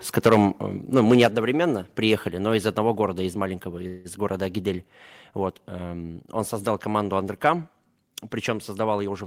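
From 0.17 to 0.45 s the speech distorts with a harsh, crackling edge on its loudest syllables. This is microphone overload, likely caused by the input gain being set so high that peaks ran about 9 dB past the converter's limit. A small share of the samples are flattened against the converter's limit, and those squared-off tops produce the grit. At 0.27 s, inside that distorted stretch, the microphone volume steps down. Voice and background drop together by about 2 dB in a single step. That is likely the call software reacting to the overload by lowering the device's input volume.

The same sequence repeats. From 0.96 to 1.26 s a second microphone overload crackles on the peaks, about 5 dB over the limit, with a few percent of samples clipped, likely from the still-excessive input level. At 1.26 s, right after it, the microphone volume is stepped down again, this time by about 5 dB. The whole signal drops abruptly in level, likely another automatic gain cut triggered by the clipping.

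From 3.87 to 4.07 s a call audio freeze sounds as a brief buzzy, smeared extension of the preceding sound in place of fresh speech. It is likely caused by delayed packets emptying the jitter buffer, so the receiver stretched the last audio to fill about 175 ms. No speech is lost. Playback resumes where it stopped, and everything after it is about 175 ms later.

From 9.04 to 9.23 s a jitter buffer speed-up makes the speech sound hurried at an unchanged pitch. The receiver cut short pitch-period pieces, roughly 70 ms in total, to drain excess buffered audio, so that stretch plays at about 134% speed.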